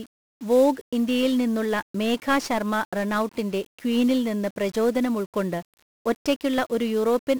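Throughout, 1-bit DFPWM compression, consistent with a 48 kbps stream, steers an adaptive level one bit per sample, burying the treble under heavy crackly hiss.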